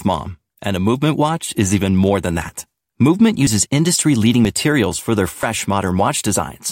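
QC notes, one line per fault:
3.47, 4.45 and 5.43 s: audio missing between chunks. Each is a brief skip where a very short piece of speech, around 20 ms, drops out and the two sides butt together without silence. The steady spacing of about a second likely reflects 1-second processing chunks losing audio at each handover.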